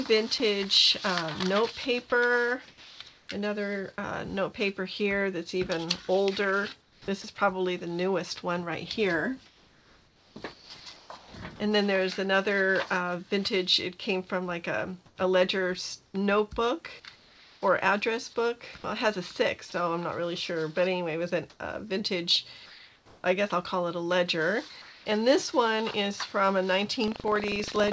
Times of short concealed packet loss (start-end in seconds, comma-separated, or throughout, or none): none